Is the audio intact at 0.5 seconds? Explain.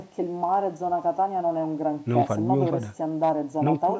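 No. From 0.44 to 0.55 s, hard clipping overdrives the speech by about 1 dB. Its peaks are sliced flat on the waveform, adding crackle on peaks and vertical harmonic streaks on a spectrogram.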